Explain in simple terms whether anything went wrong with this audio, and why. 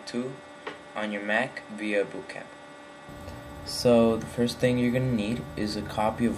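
For the first 3.09 seconds, the sound is duller, a bit quieter, and carries faint extra background noise. Nothing is heard above about 11.4 kHz there. At 3.09 s it suddenly turns clearer and fuller, with no gap at the change. This is likely an input switched to a poorer device, such as a different microphone or a headset. That poorer path cuts the highest frequencies and adds its own background noise.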